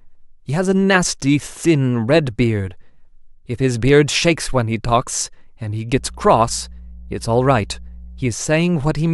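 From 5.95 to 8.31 s, mains hum sits under the speech: a steady 60 Hz tone, roughly 20 dB below the signal, from power-line leakage through a ground loop or transformer. A spectrogram shows a flat horizontal line at 60 Hz spanning that stretch.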